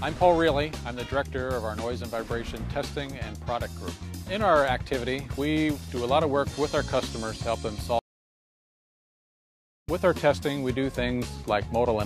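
An audio dropout to silence runs from 7.99 to 9.88 s. The sound cuts off abruptly and returns mid-flow after about 1.89 s of silence with no room tone. The input was likely lost while the recorder kept writing silence.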